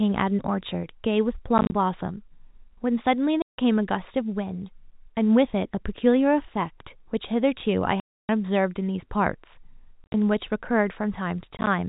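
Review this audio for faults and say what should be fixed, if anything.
Packet loss filled with silence cuts holes at 1.58–1.72 s, 3.42–3.57 s, 8.0–8.29 s, 10.04–10.14 s and 11.57–11.67 s. Missing packets became dead silence. The gaps step in 10 ms units, which fits 10 ms packets. The holes have hard edges. The longest hole lasts 290 ms.

To prevent it, use an adequate jitter buffer with packet loss concealment or forward error correction instead of silence insertion.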